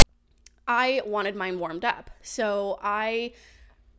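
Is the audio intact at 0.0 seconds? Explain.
No. At the start of the file, from 0 to 0.02 s, a block of text tags is played as audio: metadata bytes are decoded as if they were samples. The result is a brief, hard-edged burst of loud rasping static, with the waveform offset to one side.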